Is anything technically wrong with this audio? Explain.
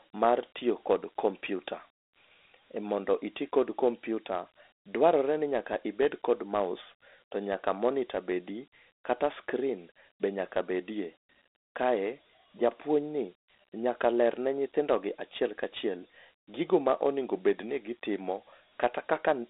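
Yes. Throughout, the speech carries Dialogic VOX ADPCM coding. Its coarse 4-bit adaptive steps leave a plainly audible gritty hiss riding on the speech, within a 300 Hz to 3.6 kHz band and nothing above 3.8 kHz. That fits a 32 kbps OKI stream. Plain telephone filtering narrows the band but adds no grit that follows the speech.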